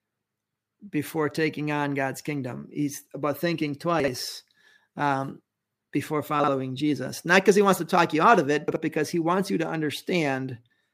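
Chunks out of order at 4.00–4.08 s, 6.40–6.48 s and 8.68–8.76 s: each time, a 40 ms chunk of the speech plays one chunk late, swapping places with its neighbour. Nothing drops out, but the reordering leaves a brief jumbled stutter with three hard joins.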